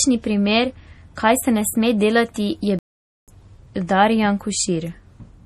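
All the way through you can hear MP3 compression: a watery, swirly edge, likely from a low bitrate, something around 40 kbps. Then from 2.79 to 3.28 s there's a playback stall: the speech just stops dead for about half a second, likely the player running dry of data, before carrying on.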